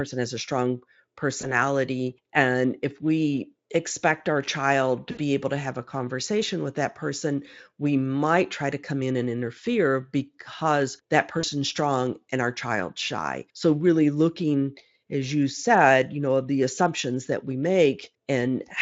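At 1.41 to 1.54 s, at 5.11 to 5.19 s (after "we expect our child", before "able to have a") and at 11.39 to 11.45 s (after "and interfere because that", before "strong and our child's") there's VoIP packet loss concealed by the speech codec. The decoder fills each gap by stretching the last sound into a fading buzzy tone or coloured noise, and the output stays a bit off for a moment after the packets come back. The three gaps point to about 20, 60 and 40 ms of lost audio. The Speex coding at 34 kbps adds little or no audible damage of its own.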